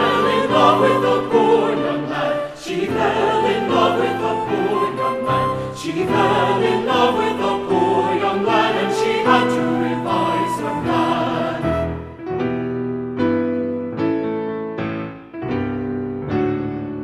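No technical faults are audible anywhere in the sound.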